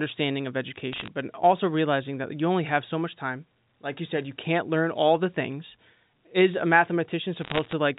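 Bit errors on a digital phone line flip occasional bits in the G.711 A-law stream, well under one percent of them, so single samples jump. From 0.92 to 1.08 s and again from 7.39 to 7.73 s, this sounds like sharp ticks and crackle over the speech.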